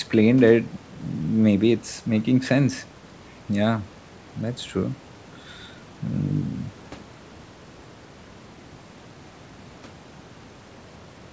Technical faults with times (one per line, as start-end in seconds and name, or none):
none